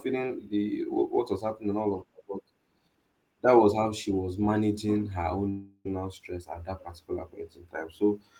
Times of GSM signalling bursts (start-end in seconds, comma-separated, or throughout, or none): none